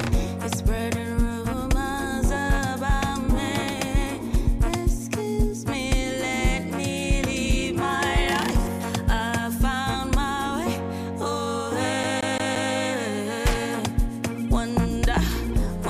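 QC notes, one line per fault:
12.03 to 12.73 s, CD stuck on one turn: a 173 ms slice of sound plays four times in a row, each pass cut by a brief mute, as a scratch kicks the laser back one track on every revolution, giving a fast, even skipping stutter.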